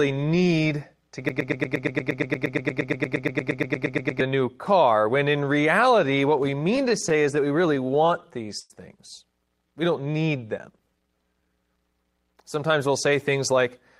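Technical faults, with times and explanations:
1.29–4.21 s, broken-record loop: the sound catches on a fragment about 117 ms long and replays it exactly, back to back, roughly 25 times, producing a rapid mechanical chatter instead of moving forward. The likely cause is the player, encoder or stream stalling and resending the last piece it held until it recovered. Whatever should have played during those nearly three seconds is lost, not delayed.
6.37–8.73 s, repeated stalls (stutter): the audio hesitates again and again, with about 19 brief hitches. The longest lasts about 104 ms, and together they add up to 281 ms, roughly 12% of the span. Packets arrived late or too slowly, so the jitter buffer kept running dry, and each time the receiver stretched the last sound, fading it on the longer waits. Nothing is missing, but the passage drags and stumbles.
10.12–11.62 s, jitter buffer slow-down: this stretch plays at about 90% speed with its pitch unchanged, so sounds seem drawn out. 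The buffer was low or had just raised its target delay, so the receiver repeated individual pitch periods and slivers of pause many times in a row to build a reserve, inserting about 152 ms of extra audio over the span.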